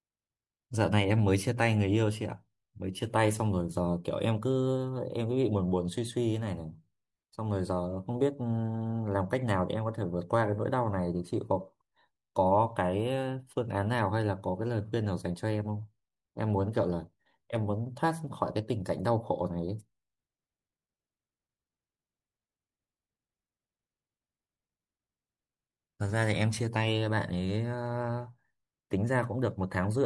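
Nothing goes wrong on the technical side anywhere in this bit of speech, so there's simply no fault to point to.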